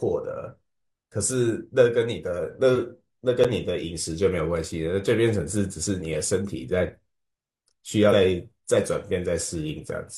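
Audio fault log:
3.44 s, block of digital silence: about 9 ms of samples were replaced by zeros, so the speech cuts out and returns abruptly, heard as a tick or dip.
8.09–8.14 s, damaged data in a compressed stream: corrupted frames made the decoder lose sync and search for the next frame header, producing a brief chirp, squawk, click or short hole.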